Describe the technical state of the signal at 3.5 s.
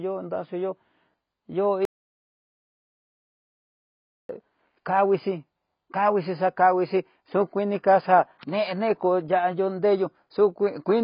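Audio dropout to silence from 1.85 to 4.29 s: the input was likely lost while recording continued writing silence, so 3.5 s falls in a 2.44 s gap of complete silence, no room tone, before "kanguixhi kanguixhi". AAC compression also runs throughout, cutting everything above 5.1 kHz and smearing the speech on either side, which likely points to a heavily damaged AAC-LC encode at around 16 kbps.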